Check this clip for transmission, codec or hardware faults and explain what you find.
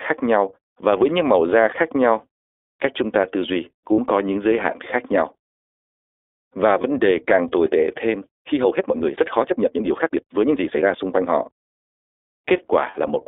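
Three kinds of fault are audible: codec damage throughout, three short dropouts, and one sped-up section.

The whole recording passes through the iLBC codec. Only about 300 Hz to 3.6 kHz survives. Each 20 ms frame is coded on its own, which fits the 15.2 kbps mode. The speech sounds thin, slightly rough and synthetic.

Lost iLBC frames occur at 3.92 to 4.00 s, just before "có những giới hạn"; at 6.82 to 6.85 s, before "đề càng tồi tệ"; and at 12.90 to 12.98 s. Packets went missing. The decoder filled each gap by repeating the last pitch cycle with added noise. Each gap sounds like a brief held, buzzy vowel. The voice recovers at once.

A time-stretched section runs from 8.48 to 11.30 s, right after "càng tồi tệ thêm". The pace jumps to about 1.66 times normal speed while the pitch stays put. It sounds rushed. Software likely dropped short pieces to fit a length.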